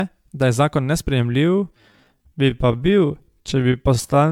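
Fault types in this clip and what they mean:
generation loss: Throughout, the speech sounds swirly and hollow with blurred attacks, likely from about seven MP3 re-encodes at 128 kbit/s.
time-stretched section: From 1.26 s, after "da je zakon", to the end, the pace slows to 0.63x at unchanged pitch and drags, likely from software repeating short pieces.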